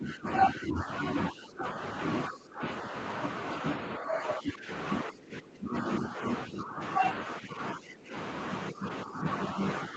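The speech dips and breaks up in five spans: 0 to 1.77 s, 2.28 to 2.93 s, 3.97 to 4.7 s, 5.05 to 8.14 s, and 8.71 s to the end. Level drops by about 15 dB, nearly 20 dB in the longest span. This is likely speech suppressed in double talk. The echo canceller treats the talker as echo and turns it down.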